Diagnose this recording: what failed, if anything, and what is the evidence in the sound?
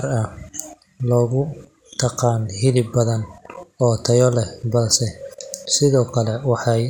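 Nothing failed; no stage leaves any audible trace here.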